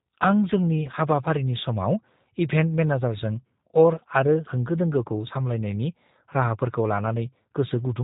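The whole clip carries G.729 codec damage: nothing above 4 kHz, and a rough, slightly synthetic speech quality that fits an 8 kbit/s rebuild of the speech.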